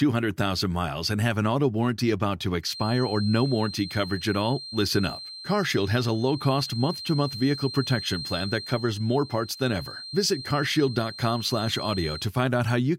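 A speaker-to-mic loop likely poised at feedback sustains a 4.2 kHz feedback whistle from 2.60 to 12.32 s, after "auto warranty about to": thin, slowly swelling and fading, well under the speech.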